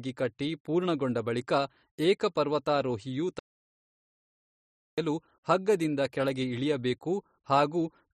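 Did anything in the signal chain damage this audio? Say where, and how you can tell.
Yes. The input path was most likely interrupted upstream of the recorder, through a lost device connection or link, while the recorder kept writing silence, which produces an audio dropout to silence. After "ಪೂರ್ಣಗೊಂಡ ಬಳಿಕ ಏಕ ಪರ್ವತಾರೋಹಿಯು" the speech cuts off abruptly at 3.39 s and resumes mid-flow at 4.98 s with "ಹಗ್ಗದಿಂದ ಕೆಳಗೆ ಇಳಿಯಬೇಕು". The 1.59 s gap is silence with no room tone at all, and whatever was spoken during it is lost.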